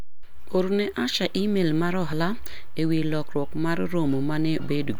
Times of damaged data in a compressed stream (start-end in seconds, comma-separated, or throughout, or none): 4.59-4.62